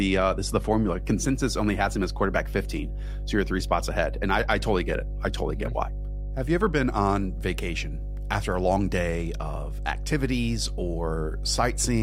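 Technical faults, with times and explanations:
Throughout, mains hum: a steady low 50 Hz drone sits under the speech for the whole clip. It is strong, only about 5 dB below the speech itself, so it stays clearly audible even while someone is talking and fills every pause. The tone is fixed in pitch and level, which points to power-line interference from a ground loop or a nearby transformer leaking into the signal path.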